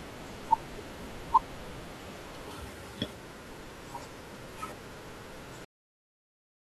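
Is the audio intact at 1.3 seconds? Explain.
Yes, at 1.3 seconds the speech plays through cleanly, with no dropout, click, distortion or other fault to be heard at that point.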